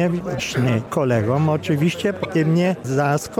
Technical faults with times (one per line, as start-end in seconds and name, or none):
0.36-0.40 damaged data in a compressed stream
2.21-2.25 damaged data in a compressed stream